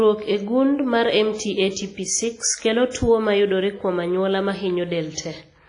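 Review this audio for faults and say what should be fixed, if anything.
Throughout the speech, consonants ring and smear over tens of milliseconds, a washy hiss swells and falls with the voice, and nothing is heard above about 10.1 kHz. This is likely WMA compression, heavy, from a transform coder whose long blocks spread quantisation noise in time and zero weak spectral lines, which fits a low bitrate around 24 kbps. Unlike noise-reduction artefacts, the hiss rises with the signal instead of gating out in pauses. Fix it by re-encoding from the original source at a higher bitrate or with a lossless format.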